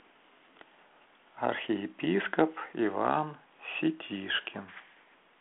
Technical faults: none

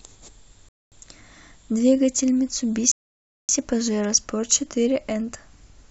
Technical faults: rebuffering stall

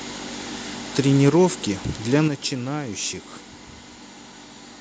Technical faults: microphone volume stepped down

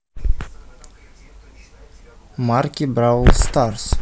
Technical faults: hard clipping

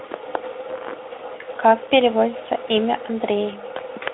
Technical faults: none

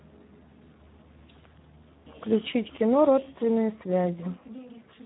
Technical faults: Speex codec

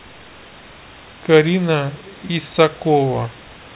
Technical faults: none

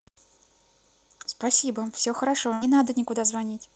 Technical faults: burst of packet loss

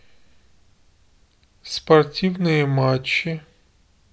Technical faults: none

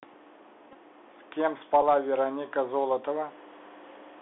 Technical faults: Bluetooth CVSD headset codec; Bluetooth headset packet repeated

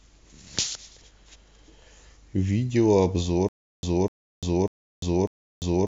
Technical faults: stutter with silent gaps

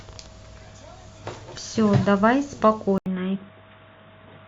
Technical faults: input switched to a poorer device

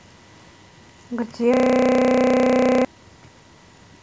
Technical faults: system hang loop

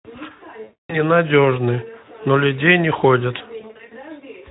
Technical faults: VoIP packet loss concealed by the speech codec

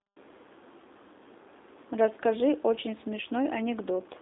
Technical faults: G.729 codec

